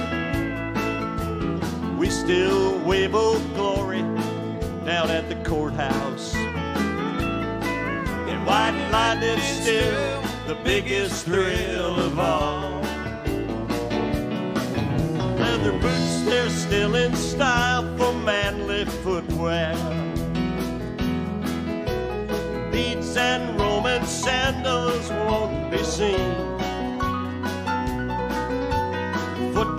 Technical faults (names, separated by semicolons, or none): none